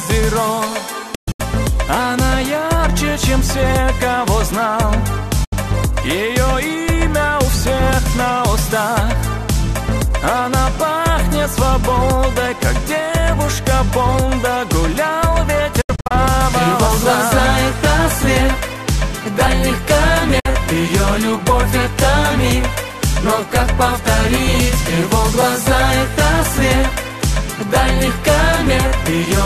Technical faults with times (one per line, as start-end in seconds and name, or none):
1.15-1.40 digital broadcast dropout
5.44-5.53 digital broadcast dropout
15.81-16.11 digital broadcast dropout
20.39-20.46 digital broadcast dropout